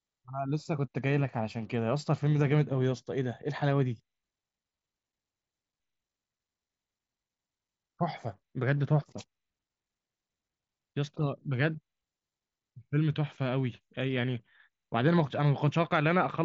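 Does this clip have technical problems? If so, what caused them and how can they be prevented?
No, this clip has no technical problems, so there is nothing to prevent.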